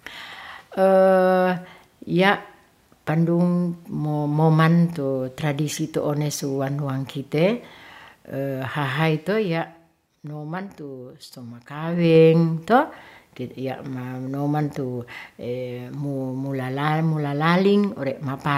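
From 11.74 to 12.16 s, a fast ticking, zipping texture rides on the speech as its level shifts by about 10 dB. This is zipper noise: the gain moves in coarse jumps of about 2 dB, roughly twenty a second, with no smoothing between them, so each jump leaves a tiny click in the waveform.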